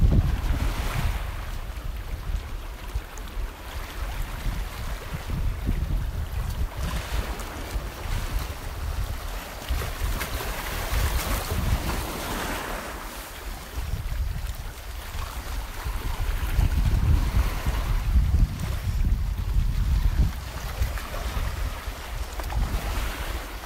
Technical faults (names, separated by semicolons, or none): corrupt frame decoded